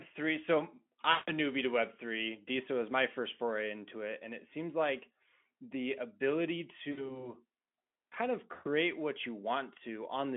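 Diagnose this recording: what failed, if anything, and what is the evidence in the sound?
What failed is the network path: VoIP packet loss concealed by the speech codec, heard three times. At 1.11 to 1.32 s, just before "newbie to web", the sound smears into a buzzy tone or a coloured noise that fades. It happens again at 6.91 to 7.27 s, after "seems like the ability", and at 8.53 to 8.68 s, between "kind of" and "what you". The Speex decoder, running at a narrow 200 Hz to 3.4 kHz line band, keeps extrapolating its last pitch and filter while turning the gain down. Those dropouts fit roughly 160, 60 and 120 ms of lost packets, and the voice stays thin for a moment after packets return.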